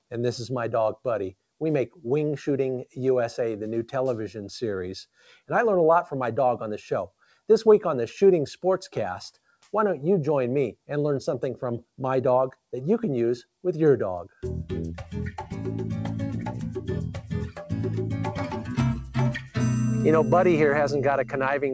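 The noise suppressor mistook sound for noise and cut it, briefly sinking it by about 17 dB at 5.18–5.5 s, about 11 dB at 7.08–7.49 s and about 12 dB at 19.41–19.56 s.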